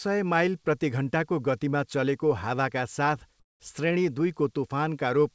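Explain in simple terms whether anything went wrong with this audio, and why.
Yes, one short spot sounds wrong. Right after "हावाका साथ", from about 3.40 to 3.60 s, the natural room background drops away for a fifth of a second and is replaced by a flat, featureless hiss that is noticeably quieter. This is comfort noise in place of the background. Likely cause: the sending end briefly stopped transmitting during the pause, and the receiving end filled the gap with synthetic noise, losing the real background's detail until the sound resumed.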